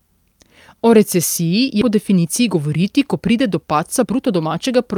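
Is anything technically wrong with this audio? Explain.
Yes, there are two faults. At 1.81 to 1.83 s there is a skip ahead: about a second of speech was discarded and playback jumps forward with no gap. From 1.91 to 4.97 s there is a jitter buffer speed-up: an overfilled buffer is drained by trimming pitch periods, so speech runs at 109% speed, hurried but unchanged in pitch.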